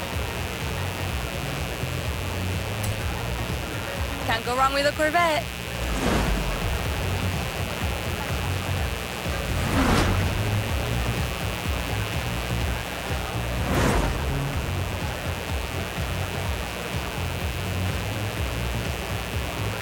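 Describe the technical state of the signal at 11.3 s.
At 11.3 s the signal carries mains buzz, as it does for the whole clip. Somewhere in the chain, a rectifier, dimmer or unshielded run is coupling sharp switching spikes from the 60 Hz supply into the audio, twice per cycle, so harmonics of 60 Hz stack up well into the kilohertz range. The result is a steady, raspy buzz sitting prominently under the sound, roughly 10 dB below the signal itself.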